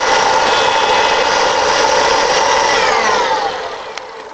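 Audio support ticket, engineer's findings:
Channel delay (comb filtering), 0.00–1.64 s. Top end dull; clears after 1.64 s. One channel lagging by about a single sample, a few hundredths of a millisecond, then summed to mono. Common content cancels near 20 kHz, the lowest notch. Probable component: downmix or channel-alignment stage.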